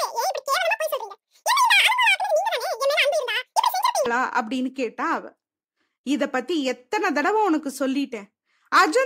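From the start to 4.06 s, the speech has been read two samples at a time, so it plays at double speed. Each pair of samples was taken as one frame. Everything runs twice as fast and sounds an octave higher, 12 semitones up.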